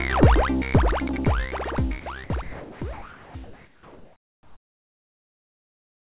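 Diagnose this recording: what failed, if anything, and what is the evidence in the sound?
Call processing: the sender's voice detector likely mistook sound for background and stopped sending, so sound was dropped and replaced by steady noise at 2.0–2.06, 2.24–2.3, 2.42–2.81 and 2.93–3.35 s.

Call processing: transmission likely paused from 3.44 s onward, leaving comfort noise in place of the background, a featureless hiss about 2 dB quieter until the end.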